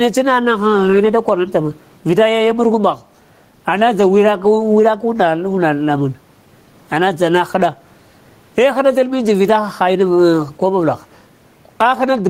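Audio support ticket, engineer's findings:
Gain pumping throughout speech: loud and soft parts squashed closer in level, roughly 15 dB swing. Likely mic gain too high, fast limiter clamping peaks.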